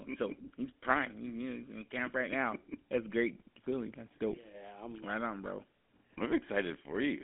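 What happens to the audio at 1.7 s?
At 1.7 s the speech has a buzzy, gravelly roughness, with nothing above 3.8 kHz and a thin line band of roughly 200 Hz to 3.5 kHz. This runs throughout the clip and fits GSM full-rate coding at 13 kbps: a modelled vocal tract driven by sparse, regularly spaced pulses.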